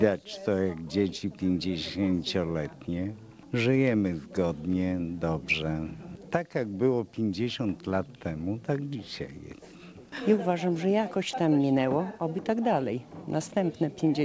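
No technical faults can be heard in this clip. It has passed through a call path that is working normally, and nothing reaches above 8 kHz, which fits a wideband call codec such as G.722.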